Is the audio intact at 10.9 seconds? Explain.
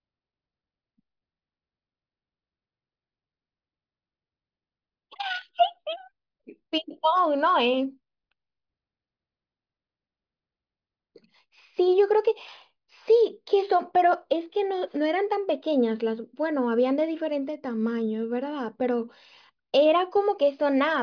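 Yes, the speech at 10.9 seconds plays through intact, with no dropout, click, distortion or other fault at that moment.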